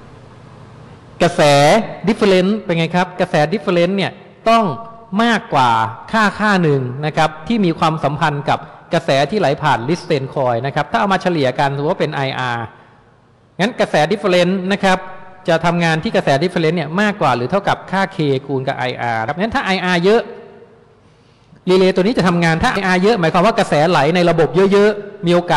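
At 19.27 s and 22.76 s, damaged data in a compressed stream makes the decoder misread frames, giving brief blips that show as thin broadband vertical stripes.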